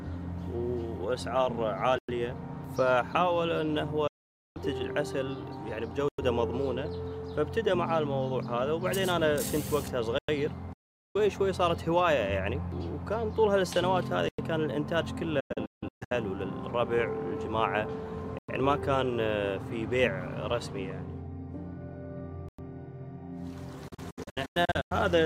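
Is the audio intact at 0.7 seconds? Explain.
Yes, the audio is intact at 0.7 seconds, with no fault at that moment.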